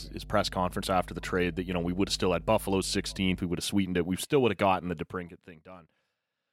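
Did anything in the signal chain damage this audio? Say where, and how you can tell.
Yes. In the analogue wiring, a ground loop or a nearby transformer has coupled the power line into the signal from the start to 3.42 s. It sounds like a steady 50 Hz mains hum with a few low harmonics, sitting only about 15 dB below the speech. The hum stays constant under pauses, then disappears at 3.42 s, where the contaminating path drops out.

Between 4.95 and 5.61 s, a gain stage in the driver or buffer path pulls the level down by about 20 dB in bare 1 dB jumps rather than a ramp. The jumps come at roughly 50 per second, which fits a gain value updated once per processing buffer with no interpolation. Each jump is a small discontinuity in the waveform, so the fade carries an audible ticking, a zipper noise riding on the speech while the level falls.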